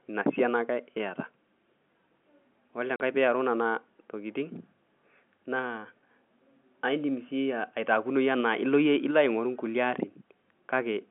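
Speech over a telephone line, squeezed into the narrow phone band by G.711 coding, with one dropout: packet loss filled with silence from 2.96 to 3.0 s, just before "piiaru nena tokitin". The audio simply vanishes for 40 ms, which fits two lost 20 ms packets. The receiver stuck dead silence in the gap, so the audio cuts out and back in abruptly, with hard edges.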